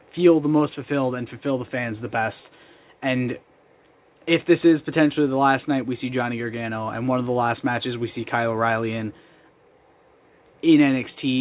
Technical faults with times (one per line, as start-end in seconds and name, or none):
none